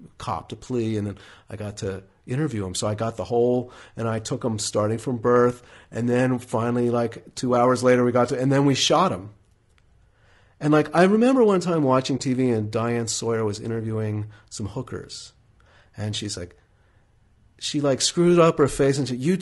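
The speech sounds rough and grainy throughout, with noise between harmonics. This is likely low-delay AAC compression at a low bitrate, around 32 kbps. At 12.17 to 12.20 s, just after "remember one time watching", AAC frame loss with muting leaves a 20 ms brief dip, consistent with one lost frame.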